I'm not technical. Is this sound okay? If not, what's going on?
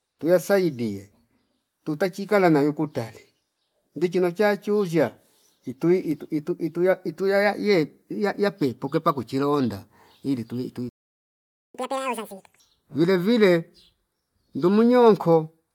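No, not quite. At 10.89 s there's a playback stall: the speech cuts out for about 0.85 s, until 11.75 s. The player likely ran short of incoming data, or got held up for a moment, so nothing came out until it recovered.

Right after, from 11.75 to 12.60 s, comes catch-up at higher speed: the player rushes through what piled up at double speed, so the voice sounds hurried and squeaky, pitched nearly an octave higher, before settling back to normal.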